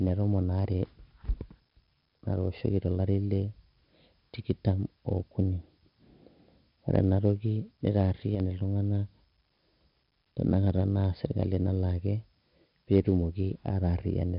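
From start to finish the speech carries heavy 4-bit ADPCM compression: gritty hiss riding every loud syllable, smeared attacks, and nothing above 5.3 kHz, suggesting roughly 44 kbps.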